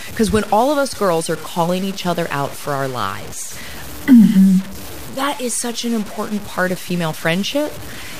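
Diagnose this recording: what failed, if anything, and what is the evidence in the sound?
Grainy distortion follows the speech throughout, only about 20 dB down: likely low bit depth without dither, truncation to around 6 bits during sample-format conversion.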